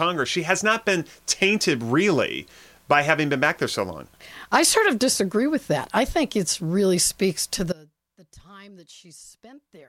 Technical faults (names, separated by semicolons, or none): audio dropout to a faint residue